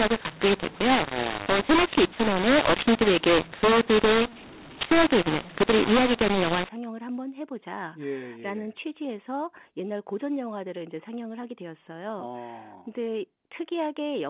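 Telephone-band speech in which the first 6.69 s suffer a mu-law and A-law mix-up: samples coded as A-law are decoded as mu-law, scrambling levels so loud parts turn harsh and pauses fill with hiss. Unlike clipping, the quietest moments are lifted into noise rather than staying clean. From 6.69 s the G.711 coding is decoded with the matching law, still capped below 4 kHz.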